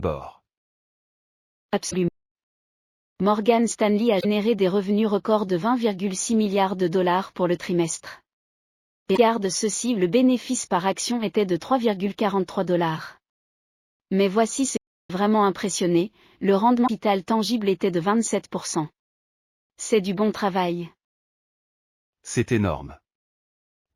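Damaged data in a compressed stream first appears at 1.87 to 1.94 s. Corrupted bytes leave the decoder unable to read its frames, so it loses sync and skips ahead to the next valid frame header. The same fault recurs at 4.17 to 4.25 s, 9.13 to 9.18 s and 16.84 to 16.89 s, each a brief disturbance.

A playback stall follows at 2.08 to 2.35 s, where the sound drops to silence mid-flow for 270 ms before continuing. A second stall at 14.77 to 15.10 s cuts out for 330 ms in the same way. These gaps are likely caused by the player running out of buffered data or having its output thread blocked, leaving nothing to send until it recovered.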